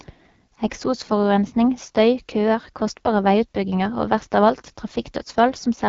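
Throughout, an AMR wideband (HD Voice) codec at one of its lowest rates, likely near 8.85 kbit/s, leaves the speech rough and raspy, with nothing above 7.4 kHz.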